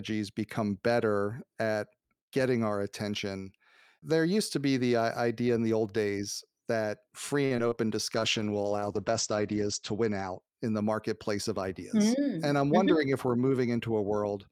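Between 7.45 and 7.79 s, packets were lost or late over and over, producing repeated packet loss with a robotic sound. Each hole, the longest about 52 ms, was patched by stretching the preceding speech, so roughly a third of that stretch is synthetic fill, heard as choppy speech with fragments missing.

From 8.16 to 10.46 s there is a call bitrate drop. The bandwidth estimate collapsed and the encoder coded far more coarsely, with a sound that fits a fall from about 48 to 11 kbps. It sits at its worst for 1.74 s, with the top end cut from 20 kHz to 8 kHz, so speech turns muffled and rough.

Between 12.20 and 12.85 s, a jitter buffer speed-up occurs. The buffer had built up excess delay, so the receiver trimmed short pitch-period slices, around 50 ms in total, to catch up. Speech runs about 7% fast at unchanged pitch and sounds briefly hurried.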